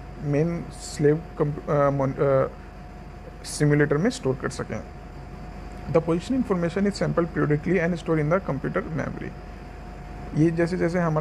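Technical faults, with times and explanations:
Nothing technical stands out here; the audio runs along without any glitches or problems worth flagging.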